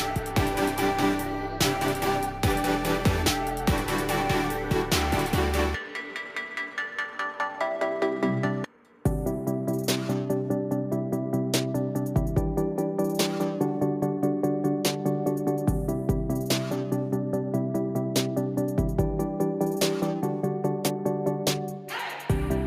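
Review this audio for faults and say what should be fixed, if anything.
Nothing here needs fixing; no faults were found on a full listen.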